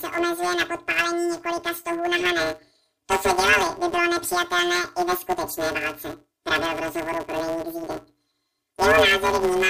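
From start to finish the speech carries a planar-as-interleaved fault. Each 256-sample block stores all left samples and then all right ones, but it is read as alternating pairs. With 5.8 ms blocks this gives a robotic buzz at about 172 Hz instead of an octave jump, which separates it from a simple sample-rate error.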